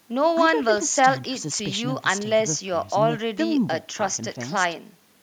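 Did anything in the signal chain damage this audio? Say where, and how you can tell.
No, nothing damaged this audio.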